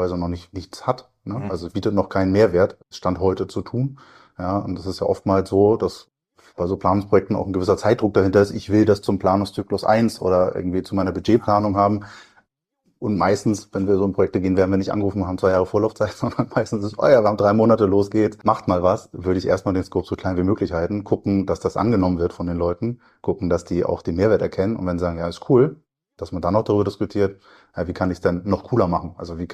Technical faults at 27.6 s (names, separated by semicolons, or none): none